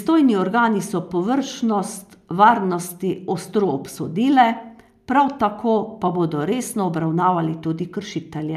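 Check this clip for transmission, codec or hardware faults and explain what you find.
Nothing in this speech recording points to a transmission, codec or hardware problem.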